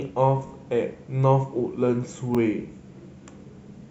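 At 0.47 s the speech stutters until 0.51 s. This is a repeated buffer: fresh audio arrived late, so the device played its last block again. One short slice of speech sounds three times, with a hard join at each repeat. Each slice lasts about 21 ms, which fits a 1024-sample buffer. At 2.35 s to 2.37 s the same fault returns with one extra play. Little or no audio seems lost.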